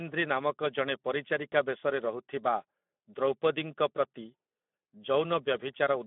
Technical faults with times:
0.00-6.06 Speex codec

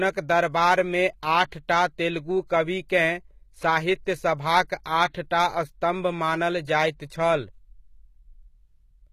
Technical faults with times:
0.00-9.12 HE-AAC compression

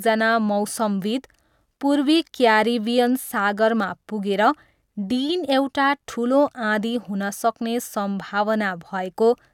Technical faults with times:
none

